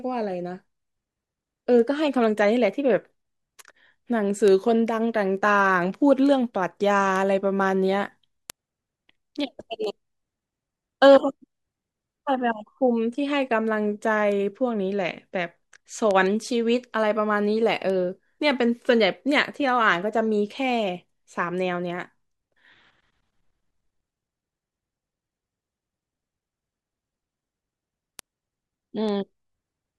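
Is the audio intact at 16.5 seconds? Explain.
No. Word clock ticks run from 0.45 s to the end, so 16.5 s falls among them. An unlocked receiving clock drifting roughly 50 parts per million slips one sample about every 0.4 s. Unlike irregular dropout clicks, these sharp ticks keep a steady, metronome-like rate.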